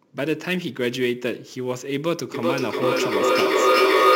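Speech recorded through a call's microphone path, with nothing above 8 kHz, carries sample clock jitter throughout: a faint roughness about 25 dB below the speech that swells on loud, bright sounds and disappears in pauses. This distinguishes it from a steady noise floor, which stays present in silence. Timing errors of roughly ten microseconds in the converter's clock cause it. From 2.34 s to the end, a feedback echo between two devices repeats the speech about every 0.4 s. The repeats grow to about 8 dB above the speech instead of fading, which separates this loop from room reverberation.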